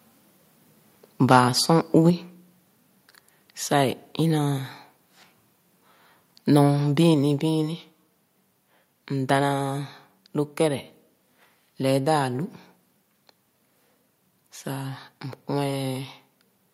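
From 1.31 to 1.39 s there is likely microphone overload: the input level appears to run about 4 dB past what the converter can represent, so a small share of the loudest peaks are flattened, giving that stretch of speech a harsh, crackling edge. At 2.1 s the level of the speech and the background drops suddenly by about 4 dB, likely because the microphone volume was stepped down in response to that overload. A second step down of about 3 dB at 7.14 s lowers the whole sound again.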